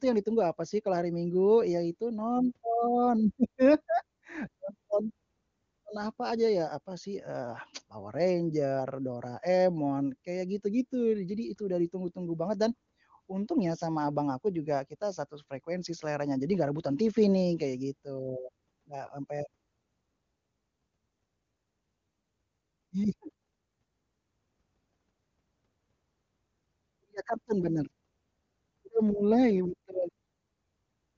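Nothing goes wrong anywhere in this recording; it has the familiar HD Voice character of the AMR wideband codec, with content stopping at around 7.2 kHz and no audible coding damage, pointing to the codec's top rate of about 24 kbit/s.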